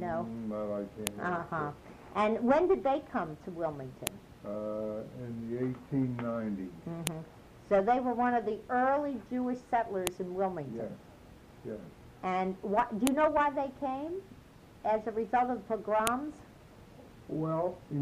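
File header played as audio appears as sharp, loud clicks at 1.07, 4.07, 7.07, 10.07, 13.07 and 16.07 s, one every 3.0 s. The audio was assembled from 3-second WAV pieces whose headers were never stripped, so each piece's leading header bytes are read as sample values. Those bytes bear no relation to the surrounding waveform, producing a brief snap at each joint regardless of what the sound is doing there.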